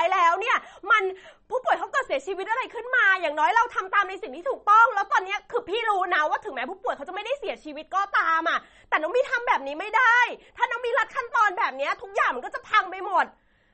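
MP3 compression runs throughout the clip: nothing sounds above 8.4 kHz, and the speech has a watery, swirling texture with smeared attacks, likely from an encoder short of bits at a rate that fits about 32 kbps, cutting the treble and zeroing weak frequency lines frame by frame.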